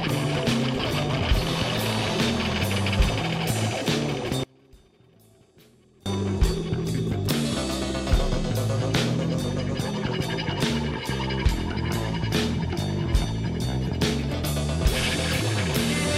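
From 4.44 to 6.06 s the audio collapses to a residue about 30 dB below its surrounding level, background included, then returns intact. This is most likely one channel inverted: one side of a stereo source had its polarity flipped, so folding to mono cancelled everything the two channels shared and left only their difference. Unlike a dropout or mute, the sound never reaches true silence, and unlike a gain dip, what survives is only that leftover difference, not the whole signal turned down.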